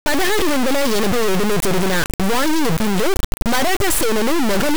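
From the very first sample to the end, the speech is buried under an integer read as float fault: the data looks like 32-bit integer samples being interpreted as 32-bit float. Those bit patterns mostly decode as tiny values near zero or as absurdly huge ones, so the output slams between silence and the clipping ceiling. You get a brutally loud, harsh square-wave buzz that follows the speech's rhythm and then drops to nothing where the speech goes very quiet.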